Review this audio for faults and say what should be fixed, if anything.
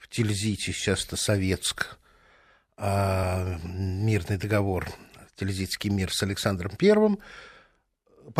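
Audio missing between chunks, likely from a recorder losing a sliver while switching 2-second blocks, drops roughly 20 ms at 1.25 s after "сейчас это", at 5.21 s after "мирный договор", and at 7.19 s, leaving abrupt skips. To prevent this, use double-buffered or overlapping capture so no samples are dropped when one chunk closes and the next opens.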